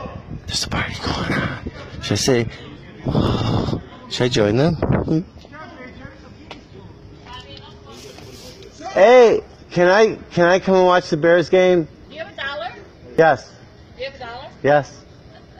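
At 3.27, 8.23 and 13.19 s the sound jumps forward, with around 40 ms cut out and the two sides butted together without silence. That evenly spaced, gapless skipping, roughly every 5 s, points to audio missing between chunks, likely lost at each chunk handover, rather than random dropouts.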